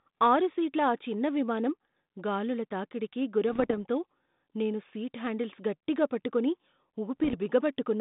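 At 3.49 s, lasting until 3.74 s, the speech breaks into pops and rough, gritty bursts. This is bit errors on an ADPCM link. A small share of bits, about 0.7 percent, arrived flipped. Each wrong bit throws off the decoder's step size and predictor, so the damage rings on briefly. The level jumps about. The same happens from 7.20 to 7.35 s. The narrow band, roughly 150 Hz to 3.7 kHz, fits a 32 kbit/s G.726 ADPCM link.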